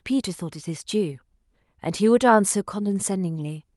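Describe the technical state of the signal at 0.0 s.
At 0.0 s the signal is intact, with the speech carried cleanly through the WebRTC call path and its normal band limit near 12 kHz.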